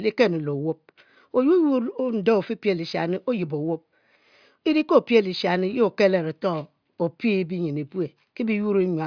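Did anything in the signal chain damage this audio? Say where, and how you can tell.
No, no stage in the chain damaged this speech.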